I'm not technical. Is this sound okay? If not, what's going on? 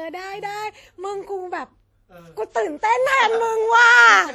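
No. The speech was most likely squeezed too hard by WMA compression, an older Windows Media Audio format, which throws away quiet detail to save space. From start to finish, the voice sounds washy and ringing, with a hiss that swells and fades along with it.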